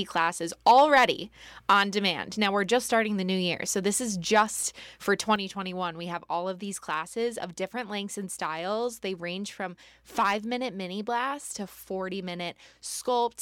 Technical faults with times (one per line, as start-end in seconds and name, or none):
5.36-13.42 sudden gain jump